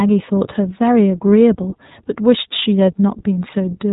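From start to finish the speech sounds boxed-in and slightly rough, with a synthetic quality that is plainly audible. Nothing above about 3.8 kHz comes through, so sibilants lose their hiss. This is the iLBC codec at work. It codes each 20 ms frame's excitation on its own, without carrying detail over from the previous frame, and the grainy texture points to the 15.2 kbps mode. Narrowband filtering removes the top end.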